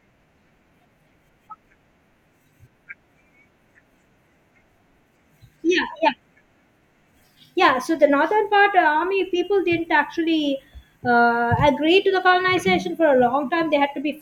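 No technical faults are audible.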